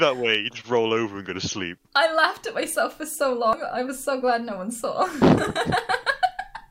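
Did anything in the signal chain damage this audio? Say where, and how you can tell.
No, nothing stood out on listening that would point to damage at any stage of the signal chain.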